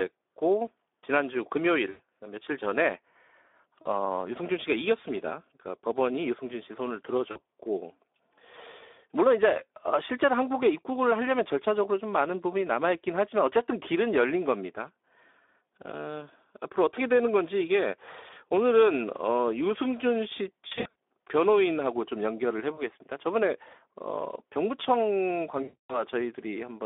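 The speech throughout sounds hoarse, grainy and boxed-in, with nothing below about 300 Hz or above about 3.6 kHz. That is the Speex codec running at about 11 kbps on a narrowband line. At that rate the CELP coder has too few bits to model the excitation, so the voicing turns rough and noisy, and the narrow band removes the bass and the sibilant air. Six times the audio smears into a buzzy, fading tone or coloured noise: 1.89–2.0 s, 3.82–3.89 s, 7.31–7.41 s, 20.68–20.93 s, 22.75–22.80 s and 25.63–26.03 s. This is VoIP packet loss concealed by the speech codec. The decoder keeps repeating its last pitch and filter at falling gain, and since each frame builds on the one before, the voice stays weak or distorted for a moment after packets return. The worst breaks are at 25.63 s, about 260 ms of lost audio, and at 20.68 s, where about 180 ms of loss is scattered over roughly 280 ms.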